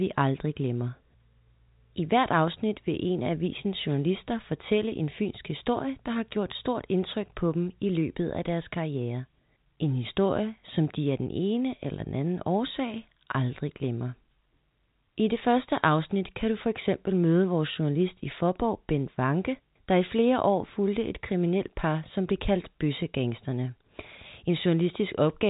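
No technical faults are audible anywhere in the speech.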